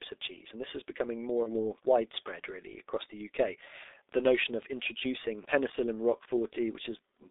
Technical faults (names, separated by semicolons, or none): G.723.1 codec; VoIP packet loss concealed by the speech codec